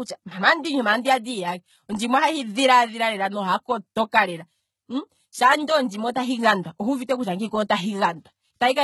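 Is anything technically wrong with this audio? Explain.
Yes. Throughout, the speech has gritty, lispy s sounds and nothing above 11.8 kHz. This is likely HE-AAC compression, with treble rebuilt from copied lower bands, fitting a very low bitrate.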